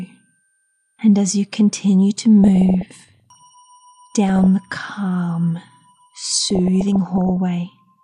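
Short blips of noise break over the sound from 2.44 to 3.43 s, 4.29 to 4.46 s and 6.40 to 7.37 s: DAB burbling, where roughly 0.4 to 0.5 percent bit errors slip into the MP2 data, putting noise into single sub-bands.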